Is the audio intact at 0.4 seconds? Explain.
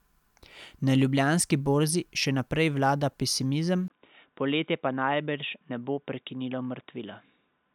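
Yes, the speech at 0.4 seconds is intact, with no dropout, click, distortion or other fault at that moment.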